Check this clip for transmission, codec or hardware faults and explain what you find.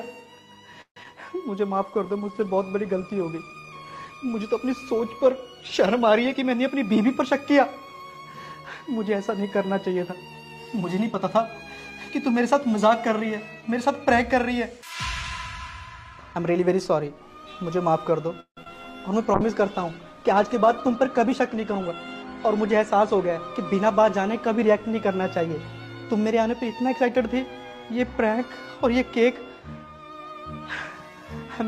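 The clip has five kinds of transmission fault, several of them recurring.

Call audio freeze, 0.81 to 0.97 s: the sound trails off as a fading continuation and goes silent for about 90 ms, then resumes where it stopped. The likely cause is delayed packets emptying the jitter buffer.

Short concealed packet loss at 1.03 to 1.06 s and again at 1.06 s: about 10 ms of audio never arrived each time, so the decoder extrapolated the preceding sound. This leaves a brief smear or wobble.

Call bitrate drop, 1.69 to 6.44 s and 19.35 to 25.84 s: the encoder fell from 128 kbps to 26 kbps, and later to 17 kbps, with bandwidth narrowing from 20 kHz to 12 kHz. The result is rougher, duller sound.

Jitter buffer speed-up, 6.33 to 8.08 s and 20.44 to 22.16 s: the receiver trimmed pitch-period slices, roughly 150 ms in total each time, to shed excess delay. Playback runs at 108% with the pitch unchanged and sounds hurried.

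Repeated packet loss (robotic sound), 18.40 to 18.68 s: four gaps, the longest 165 ms, left about 68% of the stretch concealed. Back-to-back patching produces choppy sound with pieces missing.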